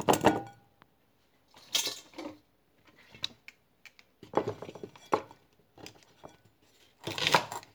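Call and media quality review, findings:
No audible faults found.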